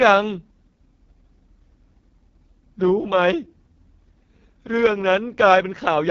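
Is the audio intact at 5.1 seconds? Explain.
No. At 5.1 s, as throughout, the speech carries heavy AMR wideband (HD Voice) codec damage: a raspy, rough model-driven rendering that fits its lowest bitrate, with nothing above 7 kHz, far above a narrowband phone's cutoff.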